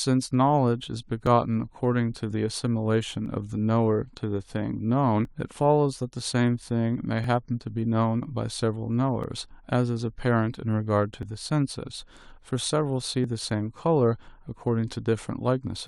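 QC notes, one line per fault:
1.27, 3.26, 5.25, 7.24, 9.24, 11.23, 13.24 and 15.23 s, overlap between stream segments. Each event drops 13 to 20 ms of speech, so the waveform jumps. Adjacent segment timestamps overlap, and the player trims sound that was never doubled. The two-second spacing fits 2-second segments.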